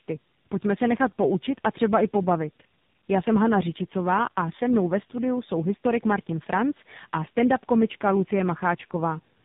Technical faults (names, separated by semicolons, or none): tandem speech coding